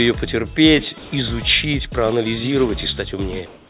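The audio arrives band-limited over a call path, with nothing above 4 kHz, which fits narrowband G.711 A-law at 64 kbps. From 0.98 to 1.12 s, sound dropped by the voice detector: about 70 ms of real sound vanish into flat noise, likely because the detector misjudged it as background. From 3.46 s to the end, comfort noise in place of the background: the detailed background, about 33 dB below the loud parts, becomes steady featureless noise with a level shift of about 4 dB. Unlike the earlier dropout, no wanted sound is lost here.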